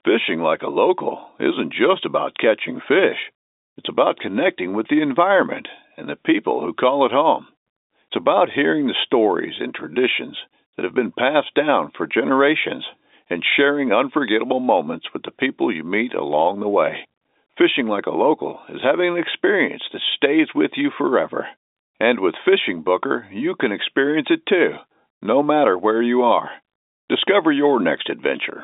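No technical faults are audible anywhere in this speech.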